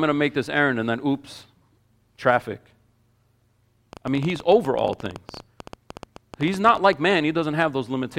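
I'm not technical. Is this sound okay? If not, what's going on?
No. From about 3.93 to 7.12 seconds, a rapid, uneven ticking runs over the speech, around 13 clicks per second, roughly forty in all. This is a train of clicks, likely from electrical interference or a faulty connection or power supply.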